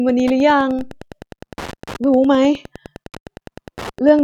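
Wi-Fi interference runs throughout the clip. A nearby radio's beacon, repeating every 102.4 ms, is rectified by the audio circuit, giving a steady ticking close to ten times a second under the speech, roughly twenty decibels below it.

A DC step comes at 0.79 s. The waveform's zero line jumps by about -25 dBFS in one instant, heard as a low thump while the speech carries on. The offset then drains away slowly, which fits a high-pass around 2.0 Hz.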